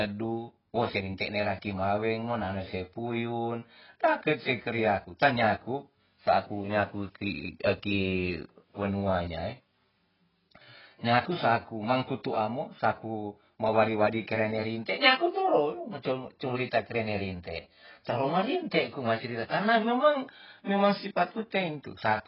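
From start to finish the speech sounds dull and smeared, with nothing above 5.5 kHz and a warbling, fizzy texture on sibilants. This is likely AAC compression, AAC-LC at heavy damage, which fits a very low bitrate near 12 kbps.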